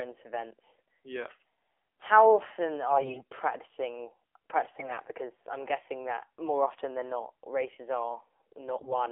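The speech runs through an AMR narrowband mobile codec at a low bitrate, which fits the 7.4 kbps mode, over a telephone-band line of roughly 300 Hz to 3.4 kHz. At that rate the vocal-tract model is fed by only a few pulses per 5 ms subframe, so the codec damage is plainly audible: the voice sounds thin, buzzy and synthetic, with nothing above the line's upper limit. AMR bit errors then strike three times, at 2.90 to 3.23 s just after "how often", at 4.78 to 5.00 s, and at 8.78 to 8.94 s. In each burst, the weakly protected bits in the frames arrived corrupted while the checksum on the core bits still passed, so the decoder accepted bad data. The bit error rate is around 10 percent in the first burst and about 7 percent in the other two. The excitation pulses land in the wrong places and the fine pitch, gain and spectral values drift. Pitch and loudness stay roughly in place, but the voice turns hoarse, scratchy and gargly for those moments.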